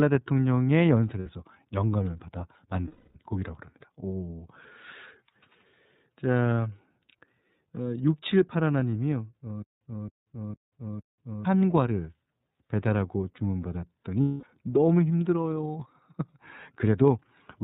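iLBC codec coding runs through the whole speech clip. Nothing above 4 kHz survives, and each frame's excitation is coded on its own, leaving the voice plainly rough and slightly synthetic. The sound fits the 13.33 kbps mode with 30 ms frames.

Lost iLBC frames first appear at 1.20 to 1.27 s, a 60 ms gap, and again at 2.87 to 3.16 s for 270 ms. The decoder repeats the last pitch cycle mixed with noise, so each gap sounds like a held, buzzy vowel, fading over the longer loss, before the voice snaps back.

A stutter with silent gaps runs from 9.62 to 11.45 s. A 269 ms fragment plays four times, every 457 ms, with about 188 ms of digital silence between repeats. The likely cause is a player or stream stalling and replaying its last fragment at each retry, so the audio meant for that stretch is gone.

Lost iLBC frames return at 14.22 to 14.44 s, a 210 ms gap filled by the same buzzy, decaying repeat of the last pitch cycle. 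Because each frame stands alone, the voice recovers almost immediately afterwards.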